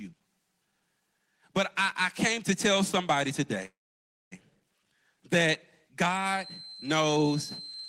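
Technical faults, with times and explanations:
3.65–4.34 s: call audio freeze. The sound stalls for about 0.68 s, with the last sound carried on briefly before roughly 0.59 s of silence. The audio then resumes where it stopped and nothing is lost, adding about 661 ms of delay. Packets were likely held up and the jitter buffer ran dry.
6.29–7.89 s: feedback whistle. A thin, steady 4.1 kHz tone sits roughly 15 dB below the speech and swells and fades slowly in level until the end. This is likely a loudspeaker-to-microphone loop held right at the edge of feedback without running away.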